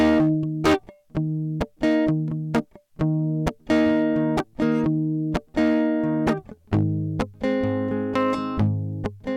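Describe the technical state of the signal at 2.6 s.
At 2.6 s the music is overdriven by about 13 dB, so hard clipping flattens a few percent of samples throughout, adding harsh high harmonic fuzz to every loud passage.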